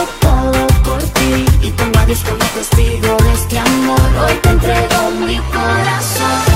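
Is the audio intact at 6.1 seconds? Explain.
No. At 6.1 s, as throughout the clip, a steady USB whine sits at 1 kHz, roughly 30 dB below the signal. Current drawn in the bus's 1 ms frames leaks through power or ground, making a fixed-pitch tone, seen as a thin, unbroken horizontal line at 1 kHz on a spectrogram.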